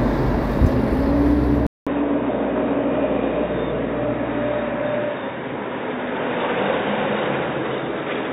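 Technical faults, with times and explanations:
1.67 to 8.32 s, input likely switched to a poorer device: after a 200 ms silence the sound turns dull and boxy, with nothing above 3.8 kHz and a new noise floor roughly 30 dB down. The spectrogram shows a hard ceiling and raised background, and the waveform drops by a few dB.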